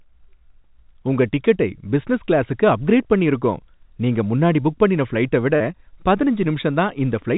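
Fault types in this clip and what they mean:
Repeated packet loss (robotic sound): after "புக் பண்ணின ஃபிளைட்டை விட", five brief gaps, up to 38 ms, are filled by repeating the last sound. Unlike a single dropout, the choppy texture keeps recurring.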